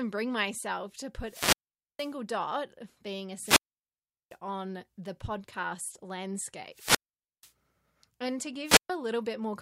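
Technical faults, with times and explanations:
1.24–2.15 s, 3.37–4.38 s, 6.72–7.52 s, 8.64–8.90 s: wireless microphone squelch dropout. The radio signal fades until the receiver's squelch mutes the output, so hiss swells and then drops to near silence for 0.47, 0.75, 0.49 and 0.13 s before the speech returns.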